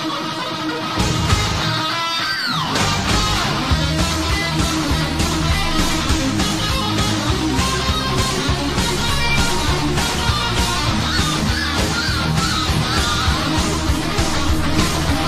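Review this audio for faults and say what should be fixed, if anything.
Nothing stood out on listening, so there is nothing here that calls for a fix.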